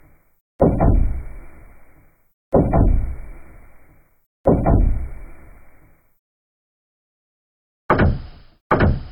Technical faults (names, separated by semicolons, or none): none